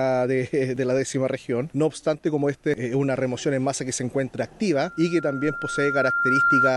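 From 4.73 s to the end at 6.76 s, a loudspeaker feedback squeal appears as a single 1.4 kHz tone that swells over about two seconds to a few decibels above the sound. Mic-to-speaker loop gain exceeds one there, and that gradual self-reinforcing growth separates it from a steady interference whine.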